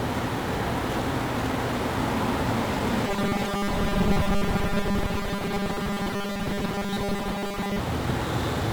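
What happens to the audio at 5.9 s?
At 5.9 s the audio is inside a stretch of robotic sound from repeated short buffers, running from 3.07 s to 7.79 s. It has a rigid, metallic 200 Hz buzz that still roughly tracks the underlying sound. The likely cause is new audio arriving too seldom, with the player filling the gap by looping the last 5 ms fragment while the real material is dropped. Roughly seven tenths of it goes missing this way. On a waveform this shows as the same 5 ms shape repeating over and over. On a spectrogram it appears as evenly spaced horizontal lines at 200 Hz and its multiples, replacing the natural texture.

Underneath, and across the whole clip, is heavy 1-bit DFPWM compression, at a rate that fits about 48 kbps. Each sample carries only one bit nudging an adaptive level up or down, so the quantisation noise is strong and spread across all frequencies. The result sounds fuzzy and crackly, with the treble buried in hiss. 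A spectrogram shows a dense broadband noise floor smeared over everything, and the waveform looks grainy and jagged rather than smooth.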